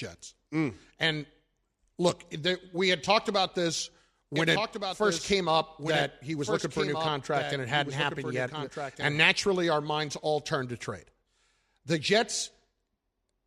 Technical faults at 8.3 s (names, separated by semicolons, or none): doubled audio track